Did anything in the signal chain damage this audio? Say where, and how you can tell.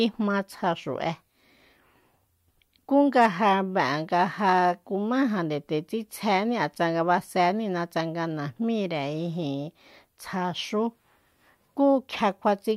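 No, nothing in the signal chain damaged this audio.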